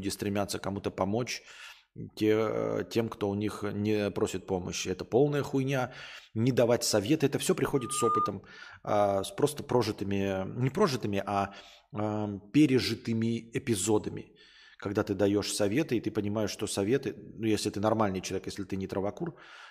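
From 7.75 s to 8.34 s a loudspeaker feedback squeal appears: the microphone picks up its own loudspeaker, and the loop gain exceeds unity at 1.2 kHz. That tone swells over roughly 0.4 s into a steady squeal that ends up a few dB above the speech.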